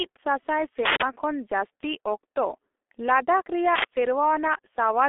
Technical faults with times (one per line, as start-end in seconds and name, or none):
0.00-5.08 G.723.1 codec
0.85-1.02 uninitialised buffer
3.75-3.84 uninitialised buffer